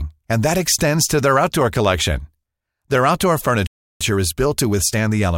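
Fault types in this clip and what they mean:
playback stall: speech cuts to silence from 3.67 to 4.01 s, about 340 ms, likely the player starving for data; waveform and spectrogram show a flat, empty gap.
time-compressed catch-up: from 4.01 s to the end, speech runs about 1.1 times fast at unchanged pitch; spectrogram harmonics keep their height while syllables crowd closer together.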